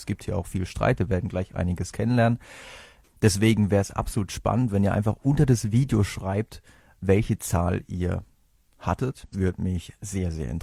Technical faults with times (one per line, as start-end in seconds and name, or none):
9.24-9.34 damaged data in a compressed stream